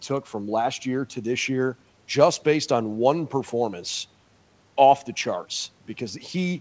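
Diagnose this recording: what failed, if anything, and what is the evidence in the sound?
Nothing failed: the speech came through a wideband G.722 call path at 64 kbps, and its only traces are the usual coding noise and the expected band limit, with nothing above 8 kHz.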